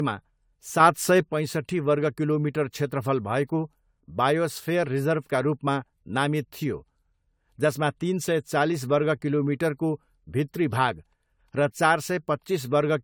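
Generation loss runs throughout the speech: the sound is swirly, smeared and hollow, with blurred attacks. The likely cause is around seven lossy re-encodes, consistent with AAC near 96 kbit/s, each pass adding fresh quantisation noise.

A sudden gain jump from 0.8 to 1.25 s, just before "पैँसट्ठी वर्ग किलोमिटर क्षेत्रफल", lifts speech and background together by about 6 dB, likely from an unramped digital gain change.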